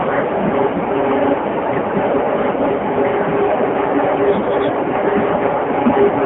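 Speech coded with the AMR narrowband mobile codec from start to finish. The voice comes through a telephone-style band of roughly 200 Hz to 3.4 kHz, and the heavy, buzzy, synthetic colouring fits one of AMR-NB's low modes, around 6.7 kbps. At that rate the vocal-tract model and sparse pulse excitation leave little detail. On a spectrogram, energy stops at a flat ceiling near 3.8 kHz with almost nothing below 200 Hz.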